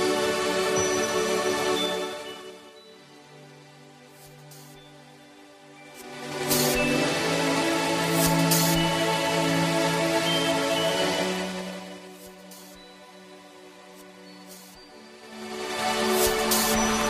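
Zipper noise appears twice, because the gain is applied in coarse, unsmoothed jumps of roughly ten a second. From 1.77 to 2.79 s the level drops by about 25 dB in 2 dB steps. From 5.76 to 6.60 s it climbs by about 25 dB in 3 dB steps. Each abrupt jump leaves a small click, so a ticking, zipping texture rides on the sound while the level moves.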